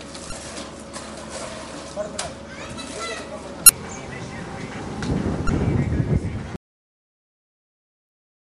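At 0.29 to 0.32 s, 3.66 to 3.70 s and 5.46 to 5.50 s there are three short bursts of damaged data in a compressed stream, each about 35 ms. The decoder hits bad frames, loses sync and hunts for the next header, leaving a brief chirp, squawk, click or hole.

From 6.56 s the audio drops out to silence and stays that way to the end. There's no room tone at all, just dead air. That points to a likely loss of the input signal while recording carried on.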